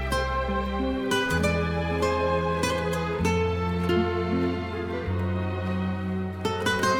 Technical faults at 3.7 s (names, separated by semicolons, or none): none